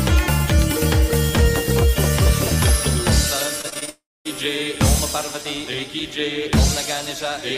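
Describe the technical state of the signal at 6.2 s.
At 6.2 s the signal is intact, with no audible technical fault at that point.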